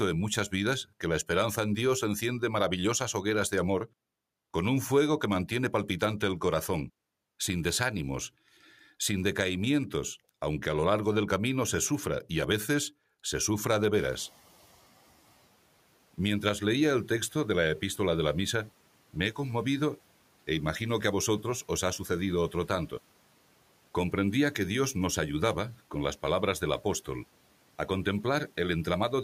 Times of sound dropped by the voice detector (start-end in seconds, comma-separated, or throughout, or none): none